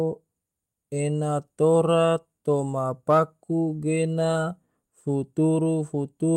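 At 2.79 to 2.81 s, about 20 ms of the speech turns briefly rough and noisy. At 3.61 to 3.75 s, about 80 ms does the same, which fits four lost 20 ms packets. Both are lost packets rebuilt from error correction. The decoder played lower-quality backup copies instead of leaving gaps.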